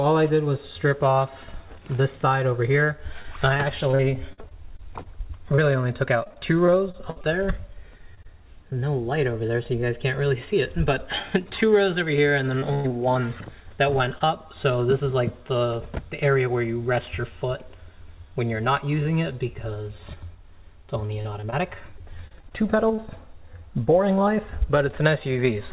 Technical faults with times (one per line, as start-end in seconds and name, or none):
3.22-5.60 repeated packet loss (robotic sound)
6.24-7.25 repeated packet loss (robotic sound)
7.97-8.73 repeated packet loss (robotic sound)
12.59-12.92 short concealed packet loss
12.74-12.86 burst of packet loss
14.18-14.22 short concealed packet loss
17.01-17.13 loose connector crackle
21.06-23.00 repeated packet loss (robotic sound)